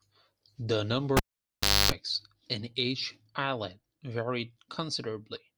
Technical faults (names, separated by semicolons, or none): cable pulled and plugged in